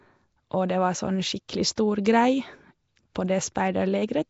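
Speech runs the whole clip with plainly audible codec damage: a rough, hissy halo around the sound and a smeared, underwater quality, with nothing above 7.7 kHz. This is likely Nellymoser compression, the old Flash microphone codec, at a rate that fits about 32 kbps. It codes short blocks at a fixed two bits per sample and fills starved bands with noise. That noise fill sets it apart from MP3-style swirly, warbling artefacts.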